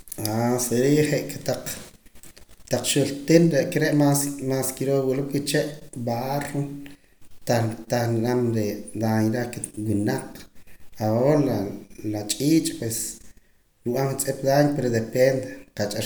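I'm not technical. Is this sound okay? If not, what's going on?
Yes, no technical faults are audible anywhere in this speech recording.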